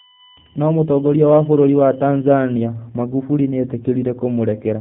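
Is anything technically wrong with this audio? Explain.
Yes, there are two faults.

G.729 codec damage runs throughout. Nothing passes above 3.8 kHz, and the speech sounds rough and synthetic, which fits an 8 kbit/s G.729 encoding. A spectrogram shows an empty band above that cutoff.

USB whine runs from 0.00 to 2.65 s. Bus current leaking through power or ground adds a steady tone at 1 kHz, strongest at its 3 kHz harmonic and well below the speech. It appears as thin horizontal lines on a spectrogram.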